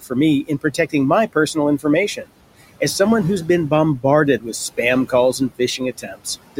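Noise suppressor artifacts run through the whole clip. The suppressor pulls steady background noise down by about 18 dB frame by frame, so the room noise, already about 18 dB under the speech, sinks in pauses. Speech cut by the noise suppressor occurs from 0.47 to 0.94 s, between "for me" and "my personal": roughly a tenth of a second of soft speech is mistaken for noise and dropped by up to about 15 dB, sounding swallowed. It recurs from 5.78 to 6.26 s, where about a fifth of a second falls by up to about 18 dB and turns faint.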